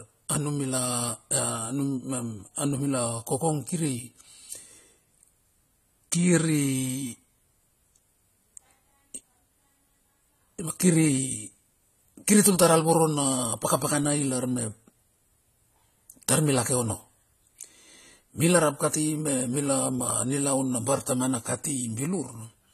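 Speech run through lossy AAC compression at a low bitrate, likely AAC-LC at around 32 kbps, sounds this way from start to finish. Too few bits are left to code every frame accurately, so the encoder discards the top of the spectrum and quantises the rest coarsely. Nothing is present above 14 kHz, leaving the speech dull, and the damage is plainly audible as a smeared, warbling texture with fizzy sibilants.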